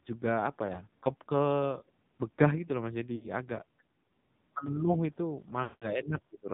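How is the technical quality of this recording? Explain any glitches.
Technical quality is poor. The speech has been squeezed through a low-rate mobile codec. There are three dropouts and one brief hole.

The whole clip carries AMR narrowband mobile codec damage. The bitrate is 5.9 kbps, near the bottom of the AMR-NB range. The codec rebuilds the voice from a simple vocal-tract model driven by a few pulses, and it passes nothing above 4 kHz. At this rate the damage is heavy. The speech sounds muffled, buzzy and synthetic, with no crisp sibilants.

Lost AMR speech frames occur three times. When frames fail, the decoder repeats its last good pitch and tract settings at falling gain. From 0.66 to 0.83 s there is a short warble, which points to a single lost frame. From 3.16 to 3.28 s a slightly longer smear is heard, which fits about 60 ms of lost audio. From 5.64 to 5.91 s the sound drags out and fades toward silence. 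That fits a run of about 180 ms. Afterwards the speech returns weak or rough.

A block of digital silence hits at 4.66 s. It lasts 5.8 ms, which fits a 256-sample buffer that was not filled in time. The sound cuts out and back with no fade. Because the gap is so short, it is heard as a tick or dip rather than silence.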